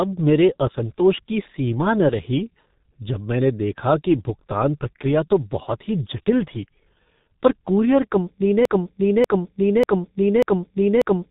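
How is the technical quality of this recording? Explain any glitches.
The recording is heavily degraded by low-bitrate telephone coding throughout, and it ends in a repeating loop.

G.723.1 codec, throughout: the sound is cut off above 3.8 kHz, and the coarse, slowly updated voice model leaves speech muffled and hoarse with smeared consonants. The heavy damage points to roughly 6.3 kbit/s. Unlike simple low-pass filtering, the roughness comes from the coding itself, not just missing treble.

Broken-record loop, 8.65 s to the end: right after "पर कूरियर कंपनी", a 0.59 s fragment repeats exactly, back to back, four times. The likely cause is a stalled stream resending its last buffer. Unlike an echo, the copies don't decay or overlap, and the original continuation is lost.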